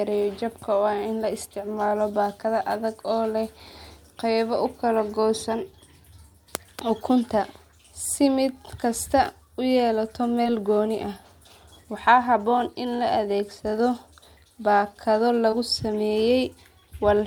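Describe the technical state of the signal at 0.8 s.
At 0.8 s the speech signal is intact, with no audible fault at that moment.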